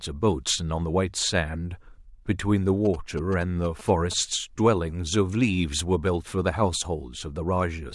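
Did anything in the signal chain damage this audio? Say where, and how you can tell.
Yes. GSM signalling bursts got into the analogue wiring: a nearby 2G phone's radio pulses were rectified by the audio circuit. From 2.85 to 4.14 s the speech carries a galloping dit-dit-dit of short buzzes at about 217 Hz, sitting clearly below the speech.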